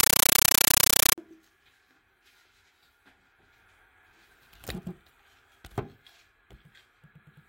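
From 0.00 to 1.18 s, a compressed stream is played as audio: the receiving end treats an AC-3 bitstream as ordinary samples instead of decoding it, so the encoded frames reach the speaker directly. Each frame gives a burst of harsh noise lasting about 9.33 ms, followed by silent padding, repeating 31.25 times a second. The result is very loud, chattering static in place of the sound. The burst density fits a 448 kbps stream.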